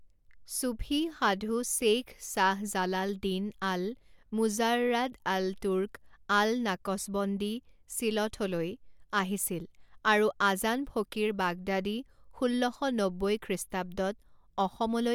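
No technical faults can be heard anywhere in the recording, so there is nothing to describe in time order.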